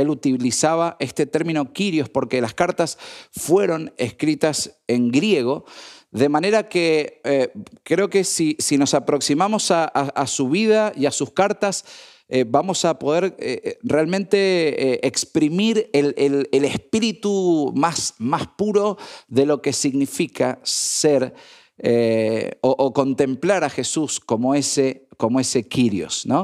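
No technical faults can be heard anywhere in this speech recording. There is nothing to mark at any point in time.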